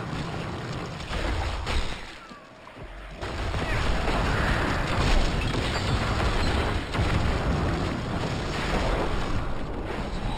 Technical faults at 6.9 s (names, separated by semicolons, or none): imaging from linear upsampling